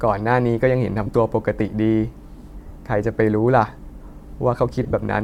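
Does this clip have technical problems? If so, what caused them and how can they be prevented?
Yes. Lost LE Audio frames at 1.06–1.09 s, 2.68–2.71 s and 4.83–4.94 s: the LC3 decoder repeats the last spectrum with randomised phase, so the sound turns into a brief noisy smear. The final stretch is a cluster of short gaps, the longest about 20 ms. Prevent it by strengthening the Bluetooth link with shorter range, less 2.4 GHz interference, or more retransmission margin.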